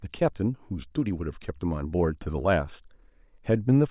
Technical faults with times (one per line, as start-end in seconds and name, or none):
none